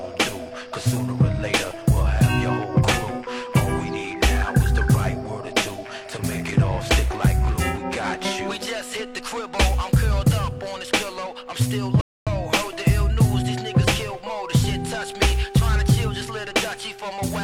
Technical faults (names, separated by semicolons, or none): rebuffering stall